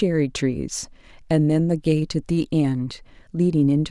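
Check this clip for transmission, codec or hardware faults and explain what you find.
No faults detected.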